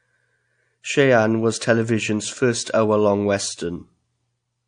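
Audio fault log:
throughout, MP3 compression: the speech sounds watery and swirly, with nothing above 9.8 kHz. The likely cause is an MP3 encoder short of bits, which cuts the treble and switches weak frequency detail on and off between frames, consistent with a rate near 48 kbps.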